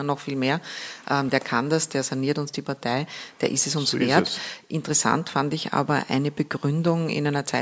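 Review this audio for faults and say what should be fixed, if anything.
Nothing to fix: no faults were found anywhere in the speech recording, so it needs no rework.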